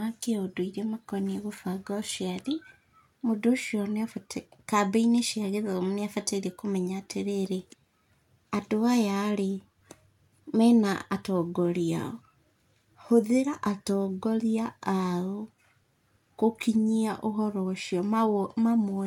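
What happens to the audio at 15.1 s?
Nothing goes wrong at 15.1 s; the speech carries on intact through that moment with no audible fault.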